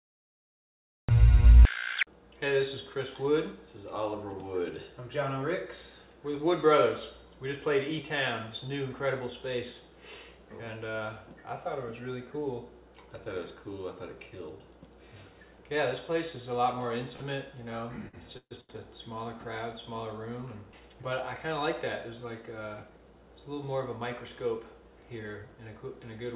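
The recording or stream began late, so this is a cut-off start: from 0 to 1.09 s the audio sits in digital silence, then enters abruptly mid-sound with no natural attack. Packets then arrived late at 17.16 s, 18.08 s and 18.61 s, and the jitter buffer ran dry each time. These short stalls from a late packet hold the last sound for about 42, 50 and 82 ms before carrying on, with nothing lost. Between 18.37 and 18.53 s there is a call audio freeze, likely from packets held up in transit. The receiver stretches the last sound for about 135 ms, and 80 ms of that fades into silence before the audio resumes from where it stopped. After the delayed packets pile up, a jitter buffer speed-up trims pitch-period slices from 20.94 to 21.48 s, removing roughly 40 ms. For that half second the sound runs about 106% fast at unchanged pitch and seems slightly hurried. Throughout, nothing is heard above 4 kHz, which fits a G.711 mu-law call path at 64 kbps.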